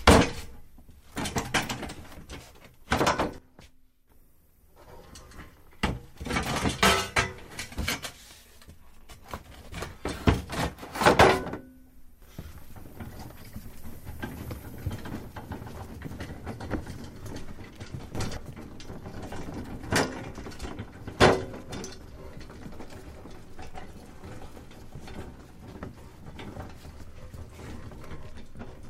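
A gain change was likely applied with no ramp, causing a sudden gain jump. Sound and background abruptly drop about 11 dB from 3.38 to 4.10 s, then leap about 12 dB from 18.15 to 18.37 s.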